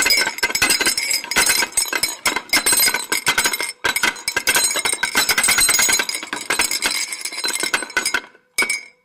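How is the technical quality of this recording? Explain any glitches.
One glitch stands out. Electrical switching spike at 1.67 s: a nearby switch or discharge likely arced and coupled into the line, adding a sharp snap peaking around -15 dBFS over the sound.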